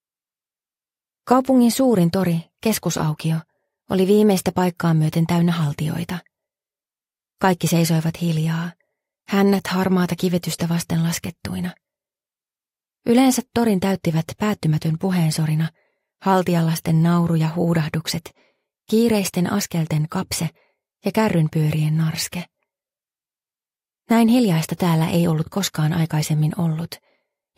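Nothing here sounds off at any point, so there's no technical fault to walk through.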